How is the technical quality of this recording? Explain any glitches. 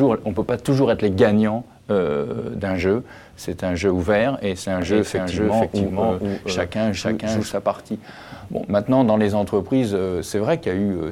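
One clear glitch stands out: a doubled audio track from 4.82 s to 7.52 s. A second full copy trails about half a second behind, at roughly equal loudness. It likely comes from a slower second capture path. It starts and stops abruptly, with no decay or room colour.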